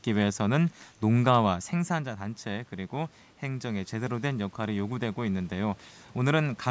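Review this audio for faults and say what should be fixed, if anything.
Automatic gain rising from 1.73 to 5.87 s: the input fell about 10 dB, so the gain control climbed about 6 dB, swelling voice and room noise together. A faster-responding gain control, or a steadier talker distance from the microphone, would prevent this.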